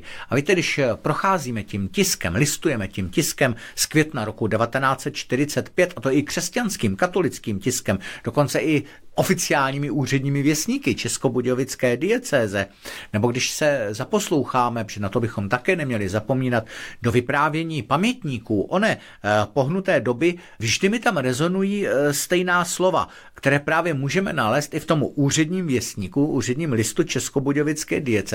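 No technical faults can be heard anywhere in the recording.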